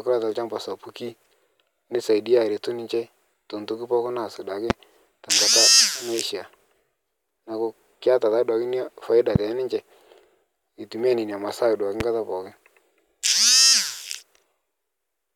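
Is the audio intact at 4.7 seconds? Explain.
No, there's a single loud pop from 4.70 to 4.73 s, right after "ntoki pooki naas duake" and before "tenkata naishaa". It's a sharp thump sitting roughly 20 dB above the speech, which carries on underneath, most likely a voltage spike from a plug, switch or static discharge.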